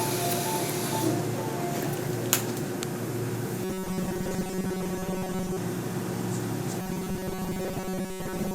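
Robotic sound from repeated short buffers appears from 3.64 to 5.58 s and again from 6.81 s to the end at 8.54 s. A fixed, metallic 188 Hz buzz replaces the natural texture, likely because a roughly 5 ms buffer was replayed while most of the real audio was skipped.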